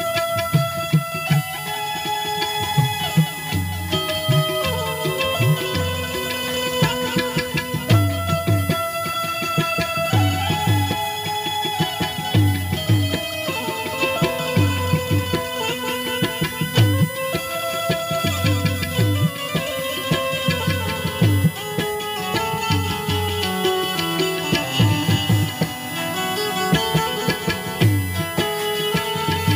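USB whine runs from start to finish: a fixed-pitch tone built on 1 kHz, with its strongest component at the 2 kHz harmonic, sitting only roughly 10 dB below the sound itself. It comes from the USB bus drawing current in regular 1 ms frames. That pulsed draw leaks through the shared power or ground into the audio path, so the whine holds its pitch no matter what the sound is doing.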